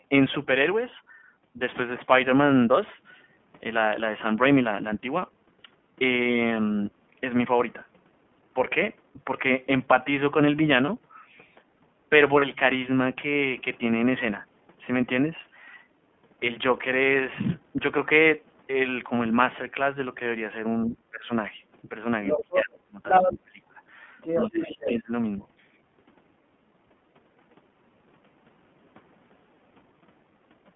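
Speech heard through the iLBC codec throughout: the band stops near 3.4 kHz, with a slightly rough, synthetic edge that fits iLBC's 15.2 kbps, 20 ms-frame mode rather than a wideband codec, whose added brightness is absent here. Two lost iLBC frames, at 10.86 s and 12.40 s, each last about 20 ms and sound like a brief held, faintly buzzy vowel. Unlike a dropout to silence or a smeared recovery, the voice snaps back immediately because each frame decodes independently. From 20.86 to 21.29 s, 22.36 to 23.0 s, 23.26 to 23.58 s and 24.46 to 25.13 s the talker's speech is pushed down, by roughly 35 dB at the first and 20 to 25 dB later, likely speech suppressed in double talk by an echo canceller. These dips come with the other side talking over the talker rather than with network loss, which is what separates them from frame loss. A second voice, likely the other side's voice leaking through, is heard at 22.26 to 22.64 s, 23.05 to 23.33 s and 24.18 to 24.98 s, close to the talker's level and briefly above it, unlike crosstalk, which would stay steady and unprocessed.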